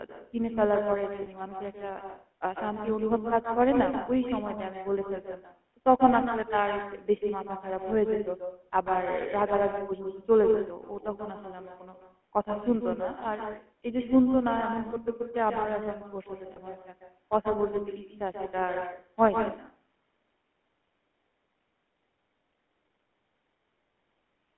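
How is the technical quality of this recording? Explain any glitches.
The quality is poor: the speech carries a strong uncancelled echo and plainly audible phone-codec damage throughout, plus two brief dropouts.

Echo with no canceller runs through the whole clip. The far end's loudspeaker feeds its microphone and nothing removes it, so each phrase returns roughly 150 ms later, about 6 dB down and thinner. On a waveform every burst has a trailing shadow. A spectrogram shows each syllable repeated at a lower level just behind itself.

The GSM full-rate codec is present throughout. Its pulse-driven vocal-tract model gives a gravelly, buzzy roughness, and the sound fits the 13 kbps full-rate coder. On a spectrogram, energy sits between 200 Hz and 3.4 kHz, with nothing above and smeared harmonics within.

Lost GSM frames occur at 1.22–1.27 s and 16.52–16.59 s, each about 40 ms, which fits two dropped frames. 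The last good frame is repeated, so the sound freezes into a short metallic ring. The spectrogram shows a flat, smeared block, and the waveform shows a repetitive stretch.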